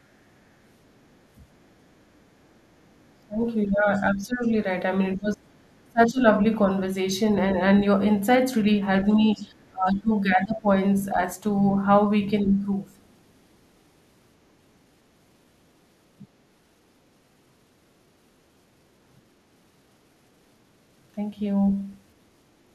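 From 1.13 to 7.14 s, the other side's voice leaks through, likely because the echo canceller left part of the loudspeaker signal in the microphone pickup. A faint second voice sits around 30 dB below the speech. From 3.26 to 6.21 s, while both sides talk at once, the talker's speech is suppressed in double talk. The canceller likely could not separate the talker from the echo and turned both down. The speech dips by up to roughly 20 dB, in pieces adding up to about a second and a half. The same pairing returns: suppression from 9.04 to 12.64 s, with similar depth and about 1.5 s affected, overlaps leakage from 9.34 to 11.04 s at about the same faint level. A brief, even quieter scrap of the other side's voice leaks through at 13.08 to 13.13 s. At 16.26 to 16.39 s, a short double-talk dip of around 20 dB briefly pulls the talker down.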